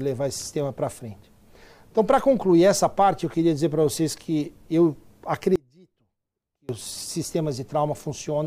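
At 5.56 s the sound drops out abruptly and stays gone until 6.69 s, a gap of about 1.13 s. It isn't true silence. What's left is a faint ghost of the signal, roughly 30 dB below its normal level, before everything snaps back at full strength. That's an audio dropout to a faint residue, likely a brief loss of the main feed while the path downstream stayed live and kept passing a little leakage.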